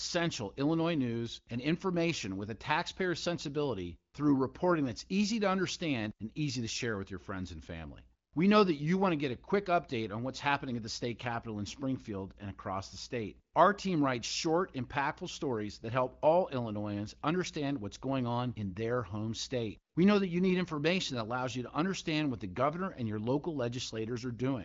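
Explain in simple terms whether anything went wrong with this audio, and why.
Nothing stood out on listening to this speech; it comes through as ordinary HD Voice phone audio with nothing that sounds broken or out of place.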